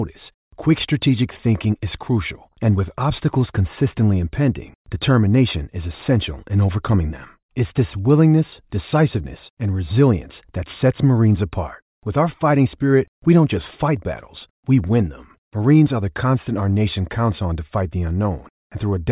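A speech recording with nothing technically wrong with it.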